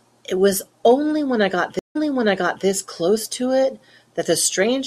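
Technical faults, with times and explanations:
1.79 to 2.66 s, stream reconnect: the speech cuts to silence for 160 ms as the connection drops. A newly started decoder then picks up the stream about 0.70 s earlier than where it broke off, so the preceding stretch of speech is heard again, and its first frame fades in. A waveform shows a flat gap and then a ramped onset. A spectrogram shows a blank column followed by a repeat of the earlier pattern.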